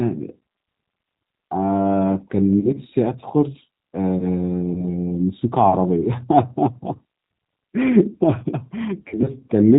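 The clip is speech carried throughout by the G.729 codec, at 8 kbit/s in its G.729A form. The damage is plainly audible. Nothing above 4 kHz survives, so the sound is muffled and narrow. The codec rebuilds each short frame from a vocal tract filter, a pitch estimate and a few pulses. That leaves the speech intelligible but rough and faintly synthetic. VoIP packet loss concealed by the speech codec is heard three times. From 2.60 to 2.69 s, about 40 ms of audio is missing, which fits two lost 20 ms packets. The decoder stretches the last pitch and filter into a fading buzzy tone or coloured noise. From 4.74 to 4.85 s, a single 20 ms gap, likely one packet, gives a shorter smear. From 9.08 to 9.29 s, about 80 ms is lost in pieces spread over 160 ms, the longest run 40 ms. Because each frame builds on the one before, the sound stays weak or distorted for a while after each gap.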